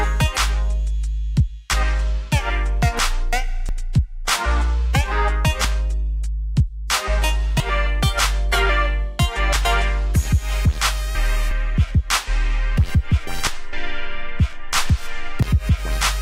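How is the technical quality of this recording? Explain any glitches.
The recording has one audible glitch, near the end. At 15.43 s there is a brief skip: roughly 40 ms of sound vanishes and the two sides butt together with no gap. This is likely audio missing between chunks, where a recorder working in 2 s blocks drops a sliver while switching from one block to the next.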